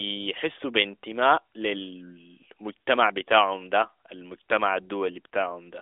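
Speech over an AMR narrowband mobile codec path at 12.2 kbps, band-limited to roughly 250 Hz to 3.6 kHz with nothing above about 3.8 kHz, and no technical fault is present.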